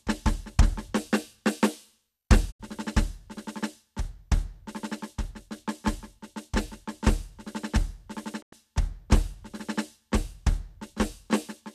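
A digital broadcast dropout at 2.50 s and again at 8.41 s interrupts this music clip: the sound fades out over about 20 ms and stays silent until 2.61 s and 8.54 s. The receiver has lost good frames and muted rather than play corrupted data. The holes of roughly 72 ms and 96 ms fit three and four lost frames, and whatever music fell in those gaps is gone.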